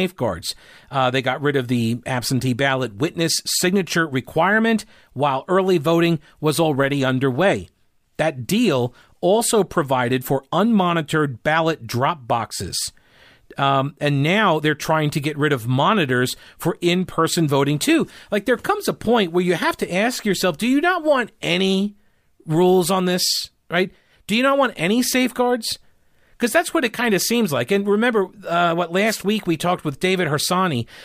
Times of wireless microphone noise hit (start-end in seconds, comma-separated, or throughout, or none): 29.05-29.24